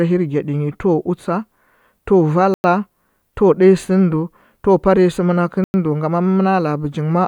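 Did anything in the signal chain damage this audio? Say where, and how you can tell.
Yes, a gap between chunks at the storage or playback stage. The speech stops dead for 100 ms from 2.54 to 2.64 s and again from 5.64 to 5.74 s, and the spacing fits 3-second chunks. Each chunk is joined to the next with silence instead of butted up against it. Unlike a dropout or packet loss, nothing is missing: the speech resumes exactly where it broke off.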